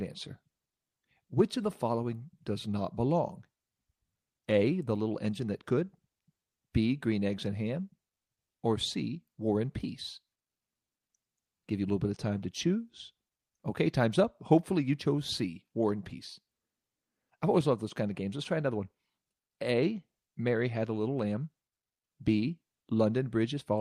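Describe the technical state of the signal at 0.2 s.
At 0.2 s the signal is intact, with no technical fault audible at that moment.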